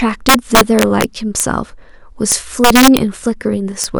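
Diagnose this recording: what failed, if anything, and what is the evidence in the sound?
A fixed-point gain or sum stage, most plausibly at sample-format conversion, let the speech exceed the largest integer without limiting, causing integer overflow. Peaks that should have stopped at full scale wrapped to the opposite sign instead, so each one jumps across the whole range as a harsh crack, far sharper than clipping. The cracks run from 0.29 to 1.04 s and 2.32 to 2.97 s, the latter overdriven by about 9 dB, with isolated cracks at 1.40 s and 3.84 s.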